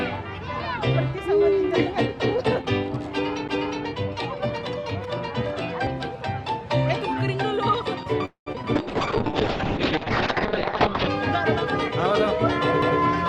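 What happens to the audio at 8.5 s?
Three faults cluster around that moment. From 8.25 to 8.48 s there is a call audio freeze: the last sound is stretched into a fading buzz that falls silent for about 110 ms. The likely cause is packets held up until the jitter buffer ran dry. Unlike a loss, nothing is missing; playback resumes exactly where it stopped, just 210 ms late.

At 8.52 to 8.56 s comes a short concealed packet loss. About 40 ms of audio is gone, and the receiver papers over it by extending the preceding sound for 16 ms, giving a brief smear or wobble. It is far shorter than the freeze, and real audio is lost rather than delayed.

Immediately after, from 8.56 to 8.58 s, the audio skips ahead. Roughly 70 ms is dropped and playback jumps forward almost without a gap, as the stream sheds built-up delay. Only about 3 ms of fill bridges this one, so it sounds like an abrupt splice, not a smear.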